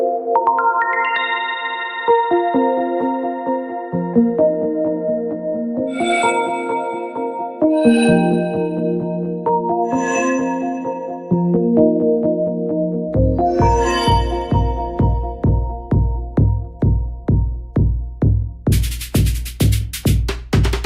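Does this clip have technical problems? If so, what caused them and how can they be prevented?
Yes. At 4.13 s there is a single brief glitch, a corrupt frame decoded. It lasts about 13 ms, which points to one damaged frame of compressed data. Flipped bits in that frame gave the decoder wrong gain values or misread codes, and it played the result anyway, so energy appears at frequencies where it does not belong for roughly one frame length. To prevent it, protect the stream with checksums or error correction and have the decoder conceal, not play, frames that fail integrity checks.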